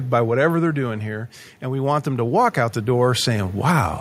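From 0.05 to 1.36 s the speech starts loud and then sinks by about 7 dB. This is automatic gain falling: the gain control judged the input too hot and pulled its gain down gradually. The waveform envelope tapers steadily, and the background floor in the spectrogram dims along with the speech.

From 1.61 to 3.95 s the opposite happens. With automatic gain rising, the control decided the input was too quiet and raised its gain by about 12 dB over more than two seconds. The speech and its background swell together, so the waveform widens slowly and the spectrogram's noise floor brightens in step.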